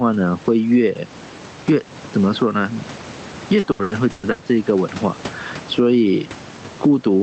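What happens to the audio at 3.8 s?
From 3.59 to 4.42 s there is repeated packet loss, heard as robotic sound. Several gaps up to 120 ms long are patched by stretching the preceding sound, so about half the stretch is concealed. The result is choppy audio with pieces missing.

Gain pumping is also present at this moment. The gain swings by around 10 dB, flattening dynamics. The likely cause is a fast limiter or compressor working against gain set far too high.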